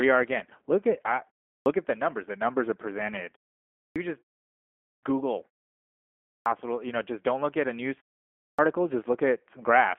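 The whole clip runs through a G.729 codec, and the damage is easy to hear. The line band sits roughly between 250 Hz and 3.4 kHz, and the speech has that slightly rough, synthetic texture from being rebuilt from a filter and a few pulses, which fits an 8 kbit/s G.729A link.

On top of that there's a clipped start after a pause, five times: at 1.59, 3.89, 4.96, 6.39 and 8.52 s. Each time the output device has dozed off in the preceding gap (0.36 to 0.97 s) and wakes late. About 65 to 70 ms of each onset is lost, so the speech jumps in abruptly. The pauses themselves go quiet.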